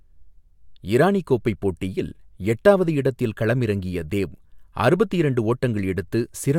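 A speech recording, and nothing is technically wrong with it.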